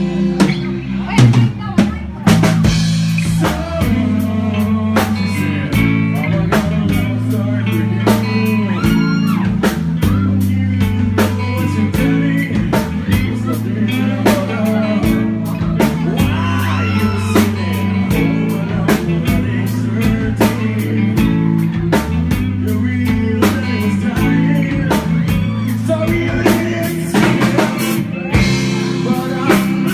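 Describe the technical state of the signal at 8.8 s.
At 8.8 s the audio is intact, with no dropout, glitch, distortion or other fault to be heard.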